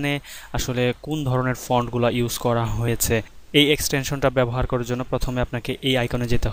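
At 2.85 to 2.88 s there is a brief burst of damaged data in the compressed stream. For about 30 ms the decoder receives corrupted frames, misreads them and loses sync until it finds the next valid frame header, producing a short glitch. On a spectrogram this shows as a narrow vertical disturbance that breaks the surrounding patterns. The waveform shows a discontinuous stretch with abrupt edges on both sides.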